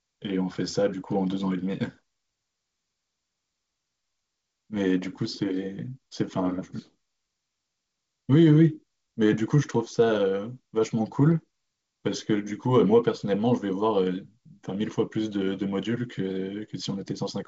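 Nothing faulty can be heard anywhere in this speech.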